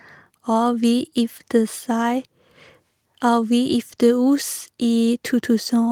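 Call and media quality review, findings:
Nothing stood out on listening to the speech in this recording.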